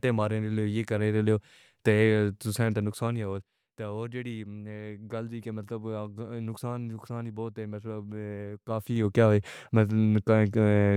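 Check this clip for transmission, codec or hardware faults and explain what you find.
There's one fault here, zipper noise, and it shows up twice. From 2.65 to 3.67 s the speech level drops by roughly 15 dB in 1 dB steps, and from 8.53 to 9.22 s it climbs back by about the same in 2 dB steps. Each fade was applied in discrete jumps, around ten a second, with no smoothing between them, so every jump leaves a small click and you hear a ticking zip riding on the speech while the level moves.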